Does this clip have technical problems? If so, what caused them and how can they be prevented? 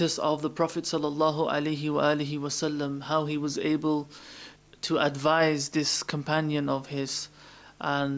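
No, nothing in this clip stood out as a technical problem on listening, so there is no cause to trace and nothing to prevent.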